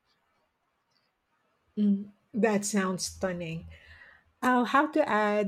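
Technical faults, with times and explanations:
No technical faults detected.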